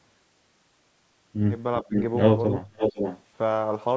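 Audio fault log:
1.82–1.95 s, speech suppressed in double talk: the speech level dips by roughly 15 dB. The likely cause is the echo canceller meeting simultaneous talk from both ends and, unable to separate the near talker from loudspeaker echo, attenuating everything.
1.95–2.02 s and 2.76–3.22 s, echo leak: a copy of the speech returns 498 ms late, roughly 5 dB below the direct sound. It is most likely loudspeaker pickup that the far end's echo canceller failed to fully remove and sent back down the line.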